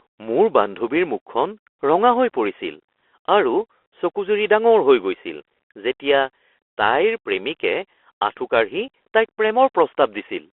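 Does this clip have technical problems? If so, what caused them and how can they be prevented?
Yes. Throughout the speech the Bluetooth CVSD headset codec narrows the sound to roughly 300 Hz to 3.4 kHz, which fits a 64 kbps CVSD headset link. The coder sends one up-or-down bit per sample with an adapting step, so fast, loud high content outruns it: s sounds turn scratchy and a granular hiss sits under the speech. That grit is what separates it from a clean telephone band limit, which only sounds muffled. Using a wideband (mSBC or LC3) headset profile or a wired microphone prevents this.

At 8.88 s there is unconcealed Bluetooth headset packet loss: a 15 ms hole, which points to about two lost voice packets between headset and phone. Nothing fills the gap, so the speech stops and restarts with abrupt edges and returns briefly quieter as the coder's step size rebuilds. That brief quiet recovery distinguishes it from a simple recording dropout or edit. 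Keeping the headset close to the phone, away from Wi-Fi interference, and using packet-loss concealment prevents it.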